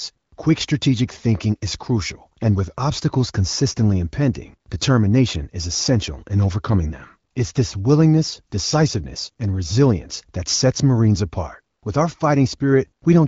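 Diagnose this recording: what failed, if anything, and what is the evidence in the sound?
Nothing stood out on listening; the speech comes through the wideband HD Voice path without any audible failure at any stage.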